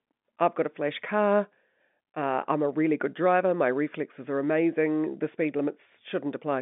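Nothing stood out on listening to this telephone-band speech, which carries the narrow range of about 200 Hz to 3.6 kHz that an ordinary G.711 line passes.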